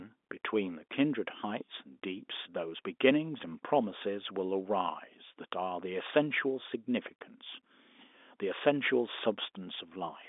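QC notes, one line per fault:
No faults heard; telephone-band speech throughout.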